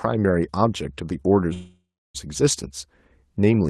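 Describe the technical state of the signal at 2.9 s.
At 2.9 s the speech comes through intact, with nothing beyond the ordinary coding character of the call path it travelled through.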